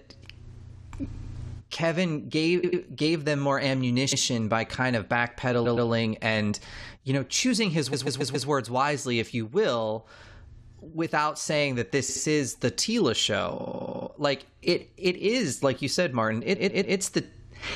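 A stuttering skip-back recurs through the speech at 1.14–1.33 s, 2.63–2.81 s, 4.11–4.21 s, 5.64–5.88 s, 7.92–8.48 s, 12.08–12.22 s, 13.59–14.07 s and 16.54–16.95 s. Each time a short block of between 70 and 139 ms plays again, from once up to seven times at 13.59 s. These are repeated frames: a run of encoded frames was re-sent or rewritten, so the decoder replays it, adding up to 0.56 s per event.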